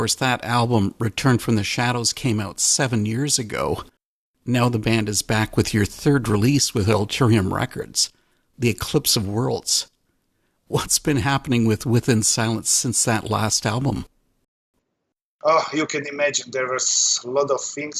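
At 14.44 s the player's downloaded audio runs out, a rebuffering stall, and playback halts until more data arrives at 14.74 s. The sound drops to silence for about 0.29 s, then picks up exactly where it left off, adding time without losing anything.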